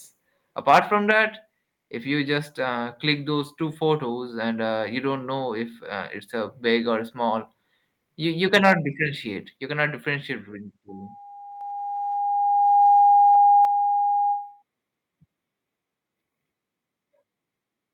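From 0.68 to 0.79 s the peaks flatten into a harsh, crackling edge. This is microphone overload: the input is likely set too high, driving the loudest parts about 7 dB past the converter's ceiling so that their tops are sheared off. A noticeable share of the waveform is squared off in that short stretch.

At 1.11 s the level drops abruptly, sound and background together, by about 4 dB. The microphone volume is stepped down, likely by the call software reacting to the distorted peak just before it and cutting the device's input gain in a single move rather than a gradual fade.

Right after "you you", from 8.54 to 8.72 s, the same microphone overload returns in milder form. The peaks exceed full scale by about 4 dB and fewer samples are clipped, but the same gritty, broken-up texture is audible on the loudest moments.

After "cannot differentiate between", at 10.89 s, a loudspeaker feedback squeal begins. 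A steady 814 Hz tone swells over about two seconds into a sustained howl, because the microphone is picking up the loudspeaker it feeds and the loop has more than unity gain at that frequency. The tone settles about 10 dB above the wanted sound and persists until 14.63 s.

At 11.61 s, within the squeal, the microphone volume is stepped up by 4 dB. The call software raised the input gain in one increment, and everything jumps louder at once, including the feedback tone.

At 13.65 s the microphone volume is stepped down again, this time by about 6 dB, likely the software pulling back after the howl pushed the input too hot. The whole mix, squeal included, drops sharply in one step.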